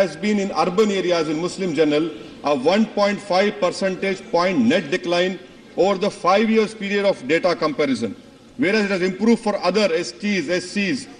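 No dropouts, distortion, timing errors or other technical faults can be heard anywhere in the recording.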